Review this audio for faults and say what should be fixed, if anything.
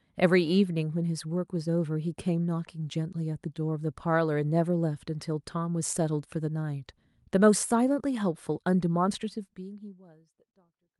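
Nothing here needs fixing; the speech simply eases out in a gentle fade from around 9 s to the end, exactly as an editor would do it.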